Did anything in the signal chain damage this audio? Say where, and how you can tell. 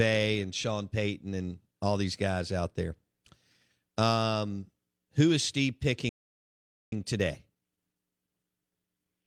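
Yes, at the playback stage. From 6.09 s to 6.92 s the speech stops dead in mid-flow for about 0.83 s of silence, then resumes. That is a playback stall, most likely the player's buffer running dry or its output thread being blocked. A network dropout differs: lost packets remove a stretch of audio, so speech would jump ahead instead of continuing seamlessly after the gap.

Right after the stall, from 6.92 s onward, the speech runs hurried at about 1.1 times normal speed, with unchanged pitch. This is time-compressed catch-up: the player drains its backlog by cutting out small slices and cross-fading across the joins. A simple faster playback rate would also raise the pitch. Here the pitch stays put.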